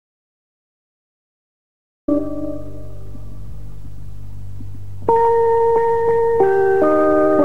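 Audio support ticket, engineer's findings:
Audio dropout to silence, 0.0 to 2.08 s, already under way at clip start: silent, no room tone, sound enters mid-flow. Likely input lost, then recorder kept writing.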